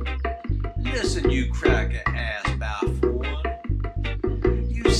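No technical fault can be heard anywhere in this audio. Nothing breaks into the sound at any point.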